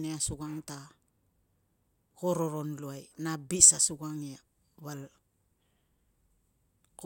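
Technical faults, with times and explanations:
No technical faults can be heard anywhere in this speech.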